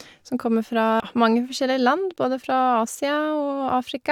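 Right at 1.0 s, between "kommer fra" and "mange forskjellige", there's damaged data in the compressed stream. Part of the data got corrupted, so the decoder misread that bit of the speech, lost sync and had to hunt for the next frame header, leaving a brief glitch.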